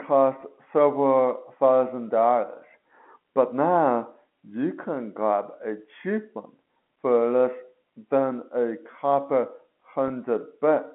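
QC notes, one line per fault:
0.41 s and 10.08–10.10 s: packet loss with pitch repetition. Losses of about 10 ms and 20 ms, fitting one and then two lost packets, are bridged by repeating the last pitch cycle. Each gap is heard as a brief held buzz rather than a silent hole or click, over the narrow telephone band.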